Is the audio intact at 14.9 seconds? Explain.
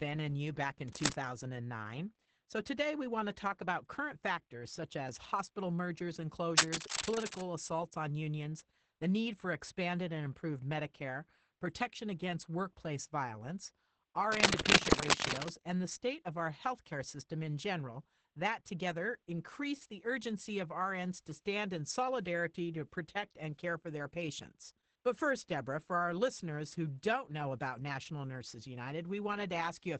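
No. From 14.32 to 15.51 s, between "protection against workplace violence" and "and the state of", a worn cable or connector was likely moved, so its contact resistance jumped erratically. This is cable scratch noise: dense, uneven scratching and rustling that sits roughly 5 dB above the speech.

Underneath, the whole clip has heavy Opus voice compression. The SILK coder, limited to a wideband 8 kHz band and coding the excitation coarsely at what sounds like a low bitrate near 10 kbps, leaves the speech at 14.9 s muffled, hoarse and faintly robotic.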